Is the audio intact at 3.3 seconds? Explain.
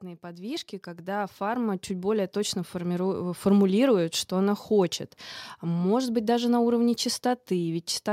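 No. At 3.3 seconds the clip is still inside an automatic gain rising, which runs from 0.05 to 3.49 s. The gain control judged the incoming speech too quiet and kept raising its amplification step by step, ending about 12 dB higher than where it began. Because the boost acts on the whole signal, the voice and the background noise behind it swell together, a slow upward creep in level rather than a sudden jump.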